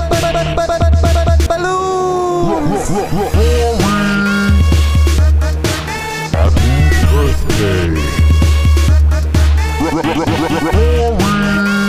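No technical faults can be heard anywhere in the audio. Nothing interrupts or alters the sound at any point.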